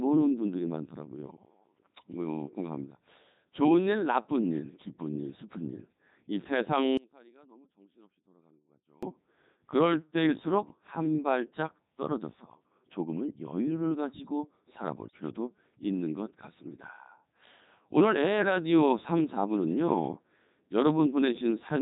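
From the first second, the speech carries the sound of the Codec 2 vocoder. The buzzy, robotic tone points to its top mode, around 3.2 kbit/s. The decoder rebuilds each frame from a pitch, a voicing decision, a level and a rough spectral shape. It then resynthesises the voice from sine waves, so the original waveform is gone. Damage here is heavy. Vowels buzz, consonants smear, and the voice sounds synthetic throughout.

At 6.97 s the speech drops out abruptly. For about 2.05 s, until 9.03 s, only a faint trace remains, roughly 30 dB below normal level. The cut is sudden, not a pause or a fade. The likely cause is an audio dropout to a faint residue. The wanted signal was lost, but the path behind the break stayed live and passed this weak leftover. Full level returns just as abruptly at 9.03 s.

From 15.08 to 15.20 s, bit errors on digital voice radio break into the audio. The burst lasts only about 0.12 s, which fits roughly three vocoder frames. 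A few percent of the bits arrive flipped. In a coder this lean, one wrong bit can reset the pitch, level or spectrum of a whole frame. The voice jumps in pitch and loudness there. It briefly turns into a warbling, robotic bleep.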